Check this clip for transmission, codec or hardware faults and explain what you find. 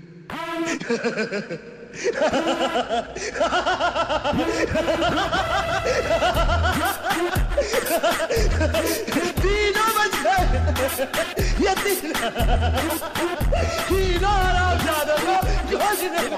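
Checking this clip turns up no faults to explain.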